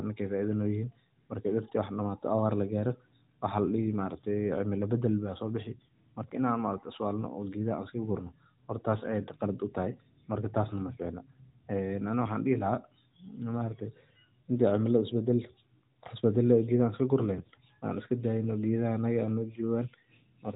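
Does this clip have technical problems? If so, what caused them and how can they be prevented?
Yes. AMR bit errors at 8.90–9.05 s and at 17.38–17.51 s (worse) turn the sound hoarse and gargly. Flipped weakly protected bits misplace the codec's excitation pulses and skew gain and spectral values. On a spectrogram, each appears as a smeared, noisy patch below the 4 kHz narrowband ceiling. Stronger radio coverage or more robust channel coding and error concealment would prevent it.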